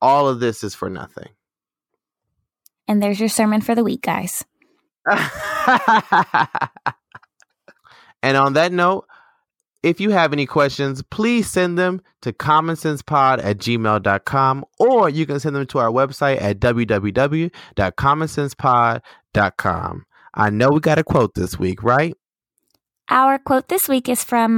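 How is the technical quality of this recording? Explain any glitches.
No glitches are audible in the recording, and there is nothing to explain.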